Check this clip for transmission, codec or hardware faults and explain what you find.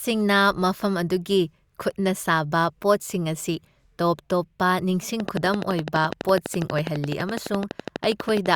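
One fault: a train of clicks from 5.20 to 8.47 s, about forty evenly spaced ticks at 12 per second, likely from nearby-equipment interference, peaking about 15 dB above the speech. The waveform shows sharp spikes; the spectrogram shows thin vertical broadband lines.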